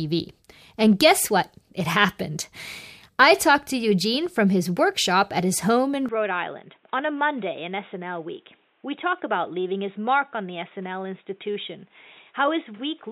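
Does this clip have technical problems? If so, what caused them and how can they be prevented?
Yes. From 6.09 s to the end, the speech turns dull and boxy and drops about 10 dB, likely because the input switched to a poorer device with a narrower band. On a spectrogram, everything above 3.8 kHz disappears abruptly at the switch, and the waveform visibly shrinks. Locking the recording input to one microphone and disabling automatic device switching prevents this.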